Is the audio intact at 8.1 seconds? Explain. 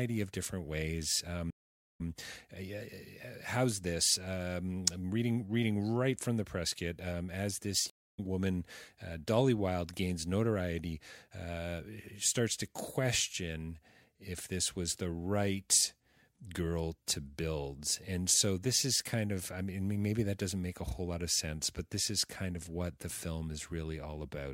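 No. A stream reconnect runs from 7.90 to 8.19 s: the connection drops, leaving 228 ms of silence, then a fresh decoder resumes the speech roughly 150 ms further on.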